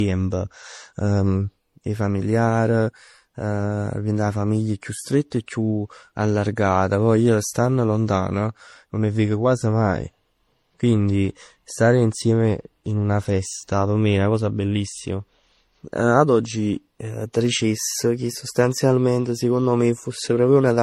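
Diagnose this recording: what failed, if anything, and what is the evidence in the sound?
The fault is at the codec stage. Throughout the speech, nothing is present above 16 kHz, and several different compression artefacts are heard stacked together. This fits transcoding between lossy codecs, likely a low-rate HE-AAC encode re-encoded to MP3 and then AAC-LC, each pass adding its own damage.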